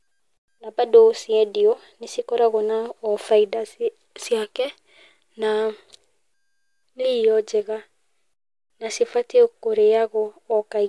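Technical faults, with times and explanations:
No technical fault can be heard anywhere in the speech recording.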